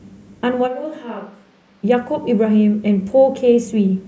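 At 0.69 s the speech abruptly turns roomy and hollow, loses low end and drops around 10 dB, with a room-noise floor roughly 30 dB below the speech; at 1.82 s it snaps back. This is likely a switch to a distant microphone, the close mic's signal missing for that stretch. On the waveform the envelope shrinks suddenly; the spectrogram shows thinner bass, smeared reverberant tails and a raised, even noise floor between syllables.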